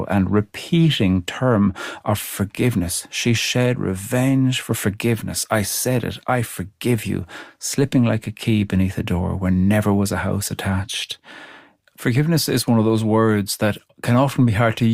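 Speech recording with no audible technical faults.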